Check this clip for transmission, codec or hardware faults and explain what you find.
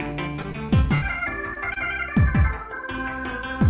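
The clip shows packet-loss damage in two forms: a burst of repeated loss early on, then two isolated concealed losses shortly after.

Repeated packet loss (robotic sound) runs from 0.36 to 1.04 s. Packets went missing again and again, five gaps in all, the longest 74 ms, totalling about 160 ms, roughly a quarter of that stretch. The receiver bridged each hole by extending the preceding sound. Because the patches follow each other so closely, the audio turns choppy, with fragments dropping out.

Short concealed packet loss occurs twice, at 1.54 to 1.58 s and at 1.74 to 1.78 s, each hiding about 20 ms of missing audio. Each time, a packet arrived too late for decoding, and the receiver synthesised a stand-in from the last sound before blending back into the real signal. These come across as a brief smear or wobble.

The band-limited character, with nothing above 4 kHz, fits the G.711 mu-law path at 64 kbps.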